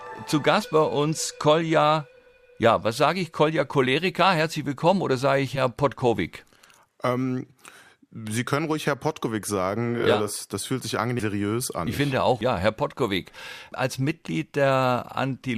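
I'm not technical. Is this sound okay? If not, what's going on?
No, there are three short jumps where compressed frames were skipped, at about 0.61 s, 5.55 s and 11.19 s. The sound hops forward by roughly 40, 70 and 100 ms, which fits 20 ms frames going missing.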